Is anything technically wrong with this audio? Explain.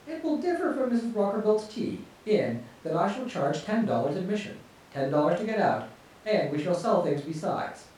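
No, nothing in this speech recording points to a technical problem; the signal holds steady and intact throughout.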